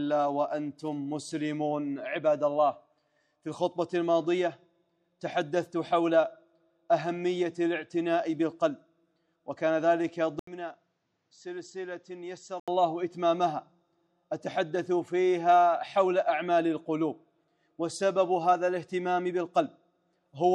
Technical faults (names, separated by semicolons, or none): input switched to a poorer device